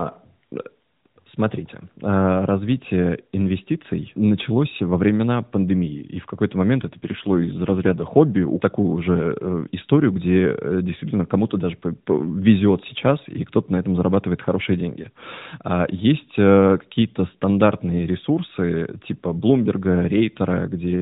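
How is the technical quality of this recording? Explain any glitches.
The recording is narrowband mobile speech with nothing above 4 kHz, and it has one glitch. An AMR rate drop runs from 6.82 to 8.05 s, ending just before "хобби в такую уже". The speech turns rougher and more buzzy-synthetic, which fits a drop from 12.2 to 5.9 kbps, with fewer bits left to model the voice. Unlike packet loss, there is no gap, and the bandwidth stays the same.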